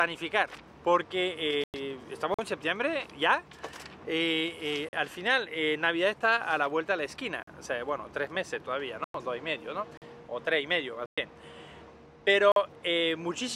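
The audio drops out three times, at 1.64 to 1.74 s, 9.04 to 9.15 s and 11.06 to 11.18 s. Each is a sudden silence of about 0.1 s (the last nearer 0.12 s), and the sound comes back further along as though it had kept playing underneath. This is likely a Bluetooth dropout: packets failed to reach the headphones in time and were discarded, and the lost stretch fits seven or eight missing packets. Separately, there is a gap between chunks: short 44 ms holes at 2.34, 4.89, 7.43, 9.97 and 12.52 s. They fall at a steady rhythm, one after every 2.5 s block of audio. Nothing is skipped here. Playback simply halts at each join between chunks and then picks up exactly where it stopped, so the regular spacing sets these apart from the longer, irregular dropouts.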